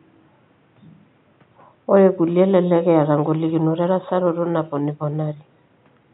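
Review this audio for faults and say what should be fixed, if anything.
Nothing in this audio needs to be fixed, as no faults are present.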